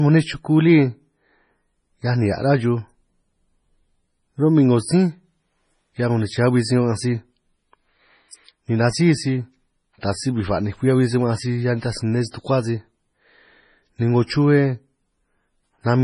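Speech with a hard treble ceiling at 10.5 kHz and watery, swirly smearing throughout, likely MP3 compression at a low bitrate near 24 kbps; a spectrogram shows a flat cutoff and flickering high-frequency patches. Pre-echo appears from 10.01 to 10.03 s, just before "taj si bij ba'ninj": a 25 ms hiss precedes the attack, visible as noise smeared ahead of the waveform's onset.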